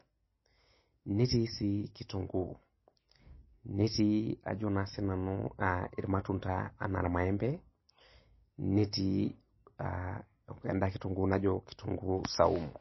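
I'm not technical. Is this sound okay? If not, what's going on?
No, the speech sounds dull and watery all the way through, with nothing above about 5.8 kHz, likely from heavy MP3 compression squeezing the file too hard.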